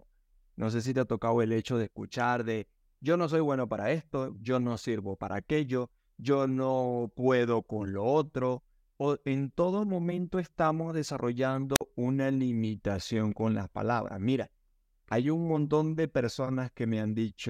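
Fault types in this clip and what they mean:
Wireless microphone squelch dropout: a brief burst of static and a roughly 48 ms mute at 11.75 s, before "una limitación con las"; the FM signal faded until the receiver muted.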